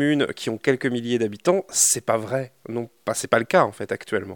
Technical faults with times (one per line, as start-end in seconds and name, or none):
0.00-4.36 low bit depth without dither